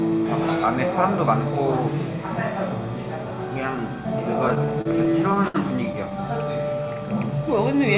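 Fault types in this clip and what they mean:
Repeated stalls (stutter): packets reached the receiver late, or more slowly than they were played, so its jitter buffer ran dry again and again. Each time, the receiver stretched out the last bit of sound until fresh audio arrived. From 4.48 to 5.56 s this happens ten times, the longest wait about 67 ms, and the filled-in stretches take up about 17% of that span. Nothing is lost, but the sound hitches and drags.
Jitter buffer slow-down: the receiver's buffer was running short, so it built up a reserve by repeating single pitch periods or small slices of quiet, many times in a row. Between 6.37 and 6.96 s this adds about 66 ms, so that stretch plays at roughly 90% speed with its pitch unchanged. The sound there comes out drawn out and slightly stretched. It all passes through a call codec that fits G.711 A-law, with nothing above 4 kHz.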